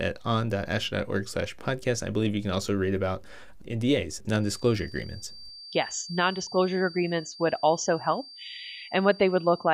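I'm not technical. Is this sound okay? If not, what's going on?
No. From about 4.35 seconds to the end of the speech, a thin, high whistle at around 4.7 kHz sits quietly behind the voice. This is a feedback whistle, likely from a loudspeaker's sound leaking back into the microphone just enough to keep one pitch ringing. Unlike a low electrical hum, it is high-pitched and slowly swells and fades in loudness, and unlike full feedback it never grows into a loud howl.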